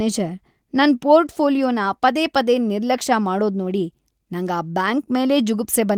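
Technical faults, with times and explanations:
No technical faults are audible in the speech, and the Opus voice compression it passed through is working as intended.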